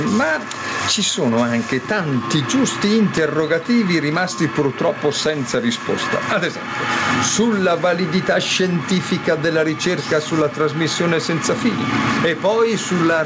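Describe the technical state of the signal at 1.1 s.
At 1.1 s you're hearing gain pumping, which runs through the whole clip: the level keeps breathing by roughly 15 dB. Likely cause is input gain set far too high, with a fast limiter clamping down. The call-codec band limit means nothing sits above 8 kHz.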